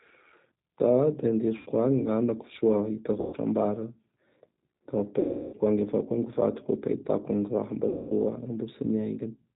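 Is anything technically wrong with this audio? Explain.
Yes, the speech passes through a low-bitrate codec and has four concealed dropouts.

G.729 codec, throughout: the rough, slightly synthetic tone and the missing top above 4 kHz point to G.729A at around 8 kbit/s. It rebuilds each 10 ms frame from a vocal-tract filter, pitch predictor and a few pulses, so the damage is plainly audible.

VoIP packet loss concealed by the speech codec, at 1.57–1.69 s, 3.21–3.36 s, 5.20–5.56 s and 7.89–8.13 s: the decoder extrapolated the last pitch and filter to cover about 90, 120, 330 and 210 ms of lost audio. Speech smears into a fading buzzy tone or coloured noise and stays weak briefly after each gap.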